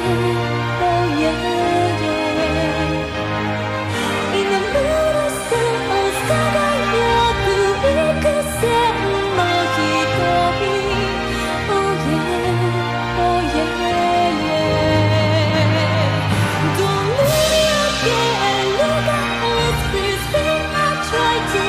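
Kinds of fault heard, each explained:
Nothing stood out as a technical fault on listening.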